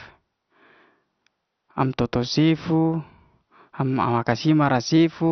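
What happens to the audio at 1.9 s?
At 1.9 s you're hearing the same damage that runs through the whole clip, likely MP2 compression at a starved bitrate, around 48 kbps. Upper sub-bands get dropped, so nothing survives above 6.2 kHz, and the remaining bands are coarsely quantised, giving a dull, gurgling, grainy sound.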